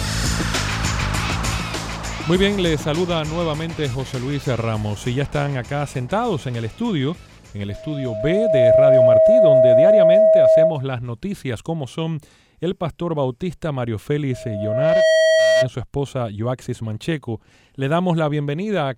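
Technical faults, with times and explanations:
7.69–10.85 s and 14.32–15.70 s, loudspeaker feedback squeal: a 640 Hz tone swells within about a second to roughly 10 dB over the sound. The microphone hears its own loudspeaker. At 640 Hz the loop gain exceeds one.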